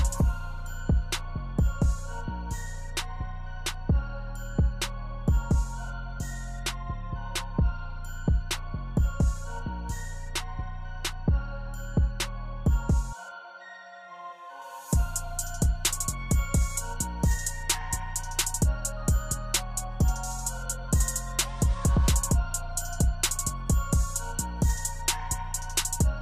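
From 14.62 s to the end, the audio has pre-emphasis left on: the treble is boosted by about 8 dB at 10 kHz relative to 1 kHz, and nothing undoes it. The shelf matches the CD 50/15 µs pre-emphasis curve, which points to a missing de-emphasis stage on playback. The sound turns thin, bright and sibilant from that point. On a spectrogram, the band above a few kHz suddenly brightens at 14.62 s and stays lifted. On the waveform, the transients look spikier.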